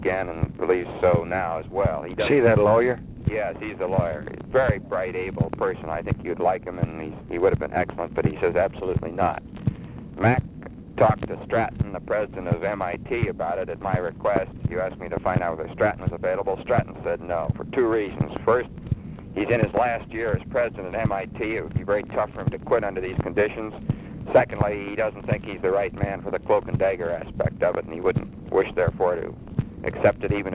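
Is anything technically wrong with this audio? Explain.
No, nothing technically wrong stands out here.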